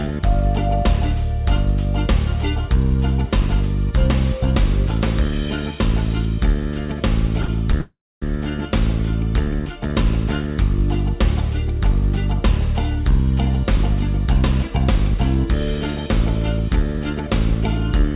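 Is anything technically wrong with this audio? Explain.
Yes. Two brief short stalls from a late packet occur back to back, at 7.42 to 7.46 s and 7.46 to 7.50 s. In each, a packet missed its playout slot, the jitter buffer emptied, and the receiver stretched the last sound, for about 15 ms and then 21 ms, until the packet showed up. Playback resumed where it had stopped, so nothing is lost, but the sound briefly holds and smears with a faint buzz or dip, pushing everything after it about 21 ms later.

A call audio freeze follows from 7.81 to 8.24 s. The likely cause is packets held up in transit, which drained the jitter buffer again. The receiver extended the last sound as a fading buzz or hiss and then dropped to silence for about 250 ms before the delayed packets arrived. Playback then picked up exactly where it froze, so nothing is missing, but a gap of about 410 ms has been inserted. 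This happens over a narrowband call path that fits G.711 mu-law at 64 kbps, with nothing above 4 kHz.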